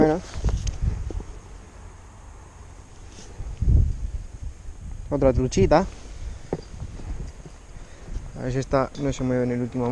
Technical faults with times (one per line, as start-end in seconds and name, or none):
none